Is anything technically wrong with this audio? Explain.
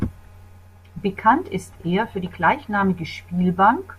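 No, no technical faults here.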